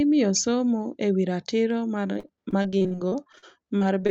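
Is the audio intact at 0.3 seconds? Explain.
Yes, the speech is intact at 0.3 seconds, with no fault there beyond the band-limited sound of the Opus call path, which reaches to 8 kHz.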